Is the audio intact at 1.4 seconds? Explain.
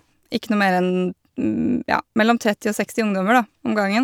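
Yes, the speech at 1.4 seconds is intact, with no fault to be heard at that moment.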